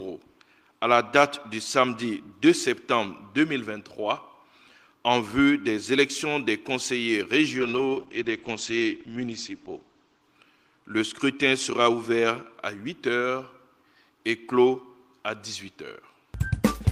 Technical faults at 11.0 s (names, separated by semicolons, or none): call bitrate drop